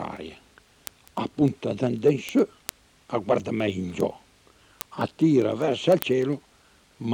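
From 0.17 s to 7.13 s, word clock ticks recur roughly every tenth of a second, about seventy in all. The receiver's clock runs free by roughly 200 ppm, slipping one sample per tick. The sharp, uneven clicks keep a steady rhythm, unlike random clicks from damage or dropouts.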